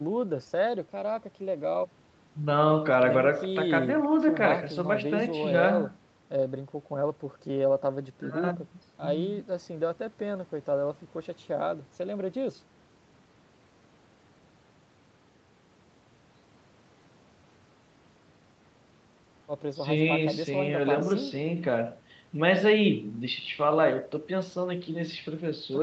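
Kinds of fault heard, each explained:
No faults are heard anywhere in this speech recording.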